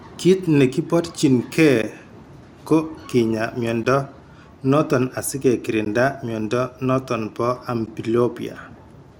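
Gaps between chunks occur at 1.82 s after "negi borchin gee", 3.83 s after "ko kinyaa", 5.85 s between "noton asige" and "mnyondo noton bo", and 7.86 s. The speech arrives in 2-second chunks with 13 ms of silence inserted at each join, giving brief hard-edged holes at regular intervals.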